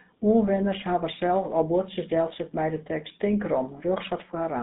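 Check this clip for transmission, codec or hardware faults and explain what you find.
The speech carries GSM full-rate codec damage, and it's there from start to finish. This early mobile codec models the vocal tract and drives it with regularly spaced pulses, keeping only every third excitation sample, which fits a 13 kbps stream. You hear it as a buzzy, gravelly roughness laid over the voice. The band is a narrow telephone channel of roughly 150 Hz to 3.7 kHz, so there's no low-end body and no air on top.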